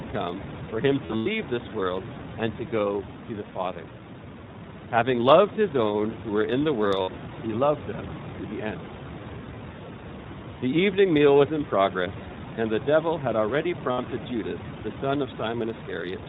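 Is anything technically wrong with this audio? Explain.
Yes. The whole clip is coded with iLBC, with a narrowband 4 kHz ceiling and a slightly rough, synthetic texture that fits its 15.2 kbps, 20 ms mode.

There are also lost iLBC frames at 1.06–1.28 s, between "come for him" and "this world and to", where losses scatter with runs up to about a tenth of a second; at 7.02–7.09 s, after "who were in the"; and at 13.92–13.99 s, after "the devil had already". The decoder repeats the last pitch cycle with noise, giving a held, buzzy vowel. Clean speech returns immediately, unlike codecs where errors linger for several frames.

The room noise, about 12 dB below the speech, is part of the recording.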